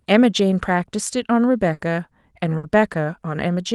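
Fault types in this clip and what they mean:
Burst of packet loss: several consecutive packets were lost, so the receiver stretched the last sound into a fading buzz or hiss for 60 ms near 1.73 and 2.57 s, then resumed with some speech skipped. A plain dropout would leave silence instead.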